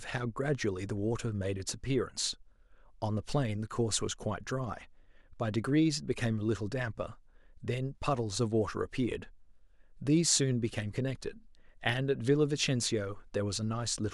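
At 11.89 s a sharp click shows as a vertical spectrogram line and waveform step, likely dropped samples removing a fraction of a millisecond.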